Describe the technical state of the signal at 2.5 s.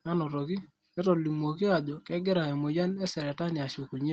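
At 2.5 s the speech is intact, with no dropout, glitch or distortion, only the ordinary call-path band limit that leaves nothing above 8 kHz.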